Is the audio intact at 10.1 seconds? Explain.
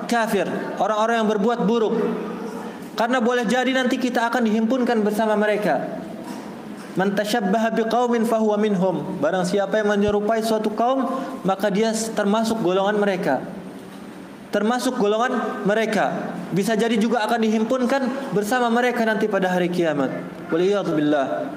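No. A loud pop sits at 10.08 to 10.11 s, a single sharp thump a few dB above the surrounding sound, which carries on beneath it. A likely voltage spike entered the chain, showing as a narrow waveform spike and a thin broadband vertical stripe on a spectrogram.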